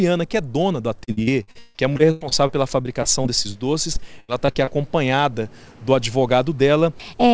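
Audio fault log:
1.04–3.57 s: Repeated packet loss (robotic sound). Holes keep arriving, the longest about 158 ms, and each gets patched by stretching the last bit of sound. About a quarter of this stretch is that filler, so it turns choppy.
3.93–4.69 s: Repeated packet loss (robotic sound) again, a shorter burst with the longest hole about 83 ms. Same concealment trick, covering roughly a quarter of the span, with the same choppiness and missing pieces, all with nothing above 8 kHz from the call codec.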